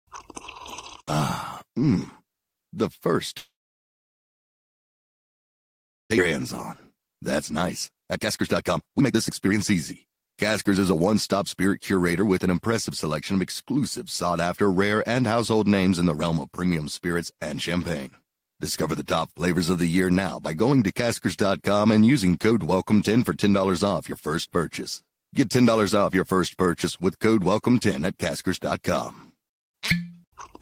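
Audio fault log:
3.37–6.12 s, call audio freeze: the speech stops and a brief fading continuation of the last sound gives way to about 2.6 s of silence, likely because packets stalled and the jitter buffer ran dry. Nothing is lost here; the pause is inserted, unlike a dropout that erases material.
6.18 s, skip ahead: playback resumes but jumps forward, dropping roughly a second and a half of speech and joining the two sides almost seamlessly. Unlike the freeze there is no gap, only missing content.
7.63–12.55 s, jitter buffer speed-up: the speech runs at 122% speed while pitch stays unchanged, as the receiver trims short pitch-period slices repeatedly to shed about a second of excess delay. It sounds hurried rather than higher, which distinguishes it from a sample-rate error.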